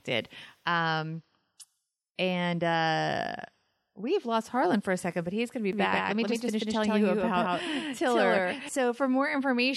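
From 5.73 s to 8.69 s, just after "he's going to be", the speech carries a doubled audio track: a second full-band copy trails the original by roughly 150 ms at about the same level. It sounds like a hard, dry slapback with no decay or room colour, cutting in and out abruptly at both ends. The likely cause is the signal being captured twice, once through a slower path, or an edit leaving two misaligned copies.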